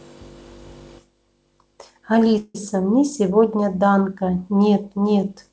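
At 2.38 s the speech stalls for about 0.19 s, ending at 2.56 s. This is a call audio freeze. For about 166 ms the last sound is stretched into a fading buzz or hiss, followed by a brief 10 ms silence. Then the speech resumes exactly where it stopped. Nothing is lost, but everything after the freeze arrives 166 ms later. The likely cause is packets held up in transit, which left the jitter buffer empty. Throughout, nothing is heard above 8 kHz, which fits a G.722 call codec.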